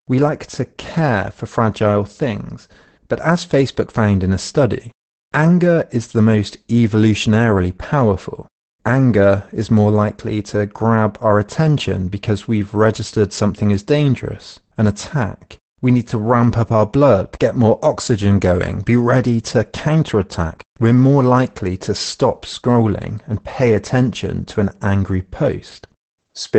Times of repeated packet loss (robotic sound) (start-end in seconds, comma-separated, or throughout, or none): none